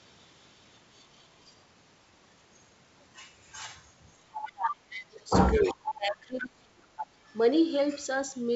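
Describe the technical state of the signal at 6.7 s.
At 6.7 s the speech is being pushed down, late in a stretch from 4.36 s to 6.95 s. This is most likely speech suppressed in double talk. With both ends talking at once, the echo canceller could not tell this talker from the returning loudspeaker echo. It attenuated everything. The level dips in pieces, at worst by around 25 dB, for roughly two seconds in total. The G.722 wideband coding adds only faint damage, if any.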